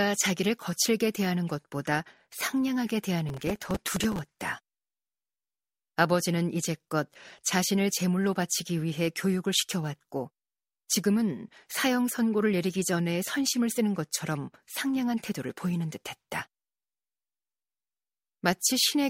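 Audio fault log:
3.29–4.19 s: processor overload crackle; dozens of missed deadlines, each fitting a buffer of a few milliseconds, replayed old audio, so hard-edged repeats form gritty tearing.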